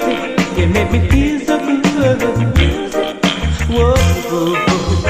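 At 3.12 s, compressed frames are skipped: roughly two 32 ms frames drop out, jumping ahead about 70 ms, heard as a sudden jump at the join; spectrogram shows a vertical seam.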